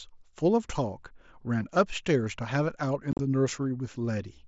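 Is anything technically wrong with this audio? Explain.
Yes. Unconcealed Bluetooth headset packet loss from 3.12 to 3.19 s: headset-to-phone speech packets went missing, and silence took their place with no concealment. About 60 ms vanishes across 75 ms, the longest hole 37.5 ms, heard as an abrupt, chopped gap.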